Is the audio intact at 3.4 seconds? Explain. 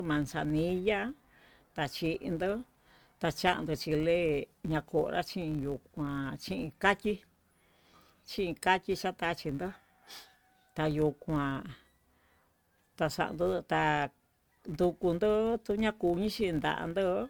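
No. At 3.4 seconds, as throughout the speech, the filter restarted on every block: each block of processing begins from silence, so a small transient lands at each boundary. The result is a buzz at about 93.8 Hz that rises and falls with the speech level, which fits a 512-sample buffer. On a spectrogram this appears as faint vertical lines roughly every 10.7 ms. On the waveform it shows as tiny regular steps at block starts.

The same moment also carries generation loss, most likely from repeated MP3 encoding at 96 kbit/s, around three passes. Quantisation noise and spectral holes have accumulated, so the sound is swirly and hollow, with blurred consonant attacks. A spectrogram shows patchy, flickering holes and smeared onsets, with nothing above about 20.1 kHz.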